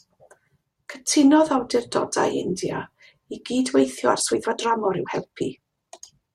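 From about 4.02 s to the end of the speech, the pace abruptly jumps to roughly 1.35 times the earlier rate while the pitch stays where it was, so the delivery turns rushed. This is a time-stretched section, likely produced by software squeezing that stretch of audio to fit a shorter length, holding pitch steady by discarding short slices of the waveform and splicing the rest together.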